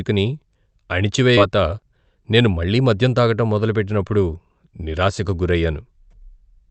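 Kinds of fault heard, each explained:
Skip ahead: At about 1.37 to 1.39 s the speech suddenly lurches forward. Roughly seven tenths of a second of audio just isn't there, and nothing was filled into the gap, so the two sides butt straight up against each other. That's the mark of audio being thrown away, either lost in transit or dumped by the jitter buffer when it overflowed, while later audio was already queued and ready to play.
Jitter buffer speed-up: Right after the jump, from about 1.47 to 3.21 s, the speech runs at roughly 112% speed while the pitch stays put, so it comes across a bit rushed. The receiver had more audio queued than it wanted and trimmed it back by cutting out tiny slices a pitch period or so long, over and over, about a fifth of a second in total. That takes out the extra delay without anyone sounding chipmunked.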